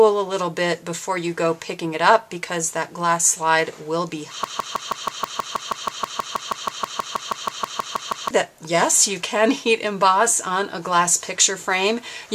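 From 4.44 s to 8.31 s the audio falls into a broken-record loop: one 160 ms fragment plays 24 times back to back, each pass identical, and whatever should have sounded in those nearly four seconds is missing. The likely cause is a player, encoder or stream that stalled and kept resending the last piece it held. Unlike an echo, the repeats don't fade or decay, and unlike a brief stutter, the loop goes on for seconds before normal playback resumes.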